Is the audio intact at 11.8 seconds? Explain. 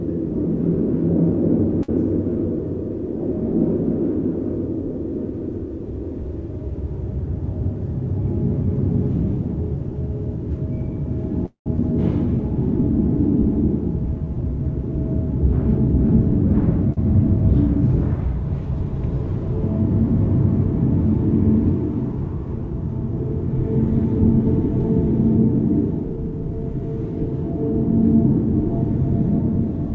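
No, there is a skip ahead at 11.77 s. About a tenth of a second of sound was dropped, either in transit or by the jitter buffer discarding audio when it overflowed while later audio was already queued. Playback jumps straight past the missing stretch, bridged by only a very short fill of about 10 ms, so the sound before and after is joined almost directly. The result is an abrupt forward jolt rather than an audible gap.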